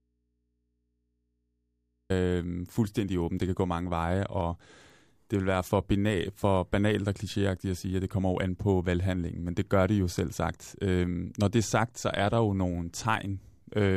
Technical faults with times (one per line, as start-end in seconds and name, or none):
0.00-2.10 audio dropout to a faint residue